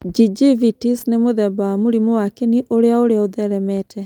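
No faults: no dropouts, clipping, glitches or other transmission or processing artefacts can be heard anywhere in the speech.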